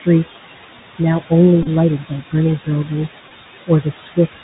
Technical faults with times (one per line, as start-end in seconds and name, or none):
0.00-4.44 noise suppressor artifacts
0.00-4.44 Bluetooth CVSD headset codec
1.62-1.68 Bluetooth headset packet repeated
3.29-3.31 Bluetooth headset packet repeated
3.67-4.43 speech cut by the noise suppressor